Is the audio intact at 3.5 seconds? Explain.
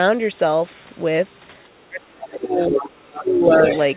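No. Right around 3.5 s two things overlap. From 3.12 to 3.5 s there's speech suppressed in double talk: the talker's level sags by about 10 dB and thins out in patches, most likely because the echo canceller couldn't separate the talker from loudspeaker echo while both sides spoke, so it turned everything down.

Then, from 3.46 to 3.79 s, you get the other side's voice leaking through. A second voice sits only about 5 dB under the talker, likely residual loudspeaker echo that the canceller failed to strip from the microphone signal.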